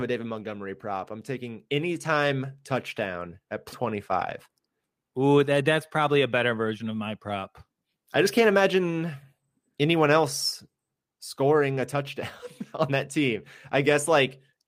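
At 3.72 to 3.83 s, right after "taking anytime touchdown at", the speech jumps forward. This is a skip ahead: a stretch of about half a second was thrown away while later audio was already queued, so playback leapt to the newer material. Unlike a dropout, no silence or concealment fills the hole. The two sides are butted together with only a few milliseconds of smoothing, so the listener hears a sudden splice rather than a pause.

From 4.29 to 4.91 s a jitter buffer speed-up follows. Having built up more delay than it wanted, the receiver repeatedly cut out short pitch-period pieces, about 50 ms in total, so the speech runs at roughly 108% speed and sounds briefly hurried. What separates this from a sample-rate or playback-speed error is that the pitch stays exactly where it was. Only the timing tightens, and no tone rises.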